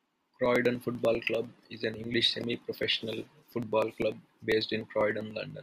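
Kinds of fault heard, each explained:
Periodic USB or driver dropouts: something keeps stalling the USB bus or audio driver about every 0.1 s, so tiny slivers of around a millisecond get skipped, giving a steady ten-per-second ticking under the speech from 0.06 to 5.50 s, roughly fifty clicks.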